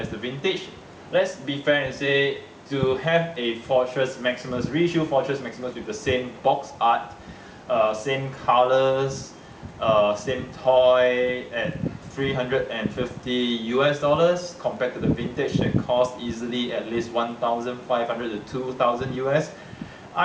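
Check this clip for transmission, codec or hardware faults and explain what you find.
No transmission, codec or hardware faults turn up anywhere in this clip.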